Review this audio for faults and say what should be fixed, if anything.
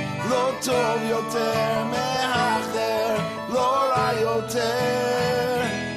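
Nothing to fix; no faults heard anywhere in the audio.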